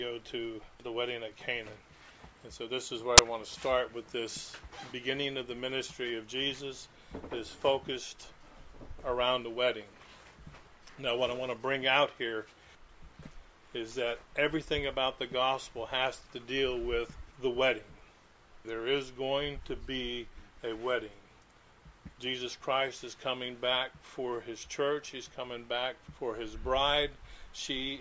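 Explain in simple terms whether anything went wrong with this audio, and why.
At 3.18 s there is a very brief, harsh burst of hiss that starts and stops abruptly. This is file tags played as audio. The file stores extra data, here a compressed cover picture, and the player read it as sound. Compressed data is effectively random, so it comes out as loud white noise. Because the block lasts only about a hundredth of a second, it is heard as a loud snap rather than a longer patch of static.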